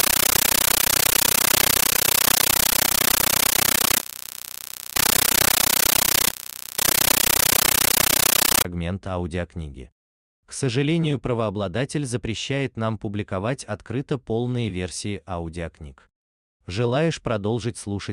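Speech, but from 0.0 to 8.65 s a compressed stream is played as audio: undecoded AC-3 data comes through as loud static in 13.3 ms bursts, 31.25 times a second, a regular chatter that steady noise lacks.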